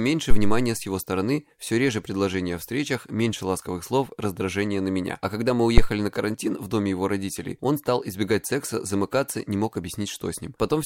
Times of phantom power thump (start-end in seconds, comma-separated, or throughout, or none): 0.31-0.74, 5.78-5.91